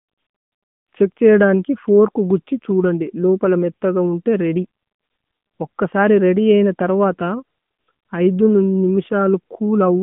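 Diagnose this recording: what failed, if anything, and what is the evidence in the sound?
The codec stage failed: the whole clip carries the sound of the AMR narrowband mobile codec (AMR-NB). Nothing passes above about 3.6 kHz, and the usable band sits between roughly 150 Hz and 3.5 kHz. The codec damage is plainly audible as a buzzy, synthetic texture. This points to a mid-rate mode near 10.2 kbps, where a vocal-tract model driven by sparse pulses stands in for the real waveform. A plain telephone-band filter would narrow the band without that buzz.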